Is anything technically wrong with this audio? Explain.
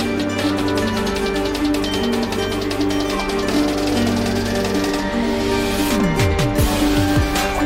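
No, the signal holds steady throughout, with nothing in it that points to a problem in how it was captured, processed or delivered.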